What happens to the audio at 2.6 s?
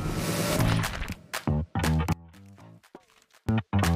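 At 2.6 s the audio is in the middle of an audio dropout to a faint residue running from 2.13 s to 3.49 s, about 1.36 s long. The wanted signal cuts out abruptly rather than fading, most likely because the feed broke while the path after the break stayed live. What remains in the gap is only a faint leak of the sound, roughly 25 dB below its normal level, until it returns just as suddenly.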